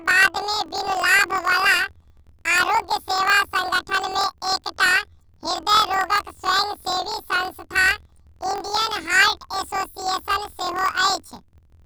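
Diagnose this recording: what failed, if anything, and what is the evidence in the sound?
Planar audio read as interleaved, at the sample-format conversion stage, throughout the speech. Each 24 ms block plays twice at double speed, left half then right, raising pitch an octave with a 41.7 Hz flutter. Unlike a sample-rate mismatch, pacing stays correct despite the octave shift.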